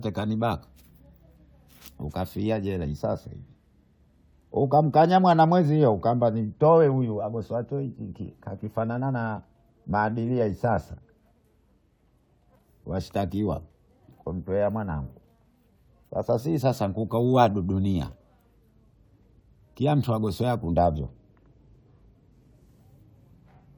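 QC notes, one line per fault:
No fault, so there are no QC notes to log.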